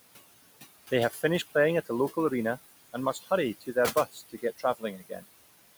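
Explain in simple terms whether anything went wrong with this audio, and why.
Yes, two things went wrong. Throughout the clip, the background noise dips between phrases and swells under them. These are noise suppressor artifacts: the system keeps turning the quiet room noise down, but not evenly, so what's left rises and falls with the speech.

There's also speech cut by the noise suppressor. From 1.1 to 1.24 s, just before "playing at a local", and from 3.13 to 3.31 s, right after "a local arena and", brief bits sound swallowed. From 4.12 to 5.24 s, scattered moments adding up to nearly half a second sound swallowed or faint. The suppressor mistook those soft sounds for noise.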